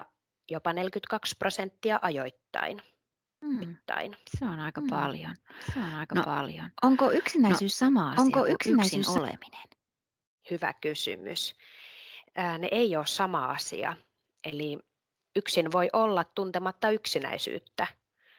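From 3.62 to 9.18 s there's a doubled audio track: a second, full-band copy of the speech runs about a second and a half behind the original at roughly the same level. It has no room tail or decay, so it sounds like a dry overlapping echo, and it cuts in and drops out abruptly at those edges. The likely cause is the audio being picked up again through a slower path, or an edit that left two copies out of step.

Later, right after "ei ole sama asia", there's a short concealed packet loss between 14.49 and 14.53 s. About 20 ms of audio never reached the decoder in time, and the receiver patched the gap by extending the last bit of sound before blending back into the real signal. You hear it as a quick smear or tiny wobble rather than a clean dropout, and a brief sound in that spot can get swallowed.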